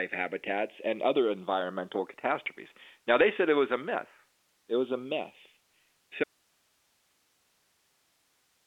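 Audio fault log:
Throughout: channels drifting apart. The left and right channels slide slowly out of step over the whole clip. The gap between them grows to about a millisecond by the end. That fits two devices running on clocks that differ by roughly 150 parts per million. Summed to mono, the shifting delay pushes comb notches slowly across the spectrum. The result is a slow, creeping flanging on the speech, heard through a telephone-band path with nothing above 3.8 kHz.
6.24 s to end: audio dropout to a faint residue. The speech cuts out abruptly at 6.24 s and never returns. What remains is only hiss, about 40 dB below the earlier signal level. The drop is sudden, not a pause or a fade. That points to the wanted signal being lost while the path after the break stayed live. The likely cause is an upstream source or link failing, leaving only the open chain's noise.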